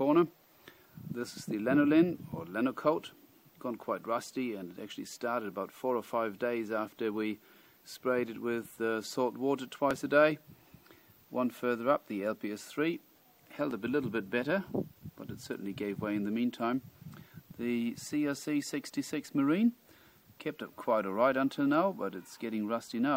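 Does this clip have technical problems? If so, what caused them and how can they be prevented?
Yes. Two devices likely running on separate clocks roughly a few hundred ppm apart caused clock drift buffer slips, heard as regular clicks every 3.81 s from 2.32 to 21.33 s. Locking both devices to one shared clock, or using asynchronous resampling, prevents this.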